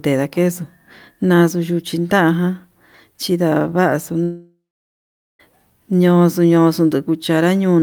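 A speech recording with a long network dropout from 4.23 s to 5.41 s. The last sound is stretched into a fading buzz, then about 0.8 s of near silence follows. This is likely a lost stream with concealment giving out. About 1.16 s of audio is lost before playback resumes.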